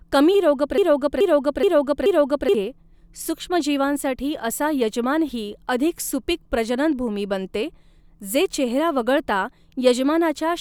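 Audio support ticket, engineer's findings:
Broken-record loop, 0.78 to 2.55 s. A speech fragment of about 427 ms repeats exactly four times back to back. Likely a stalled player, encoder or stream re-sending its last held buffer. The original audio for that span is lost.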